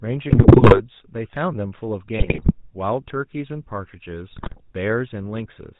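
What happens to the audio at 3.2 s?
At 3.2 s the speech carries GSM full-rate codec damage, as it does for the whole clip. The codec rebuilds the voice from a vocal-tract model excited by evenly spaced pulses. Much of the excitation detail is discarded. Nothing above 4 kHz survives. The result is a plainly audible buzzy, gravelly roughness and a dull, band-limited tone. The heavy data reduction fits a bitrate of about 13 kbps.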